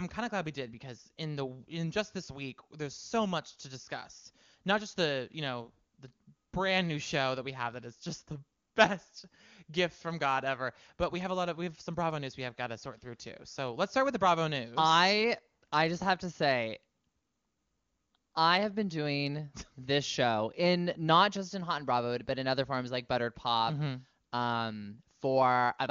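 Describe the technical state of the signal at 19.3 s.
At 19.3 s the speech is intact, carried through the AMR wideband (HD Voice) codec at its top rate of 23.85 kbit/s, where the coding leaves at most faint traces.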